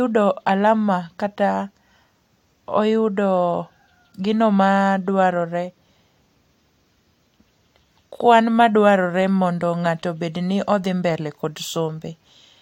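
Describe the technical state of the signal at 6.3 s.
At 6.3 s the speech signal is intact, with no audible fault at that moment.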